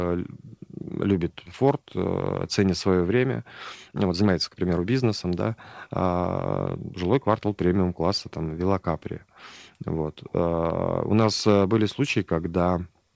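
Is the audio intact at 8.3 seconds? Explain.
Yes, the speech at 8.3 s is intact, with no dropout, glitch or other fault at that moment.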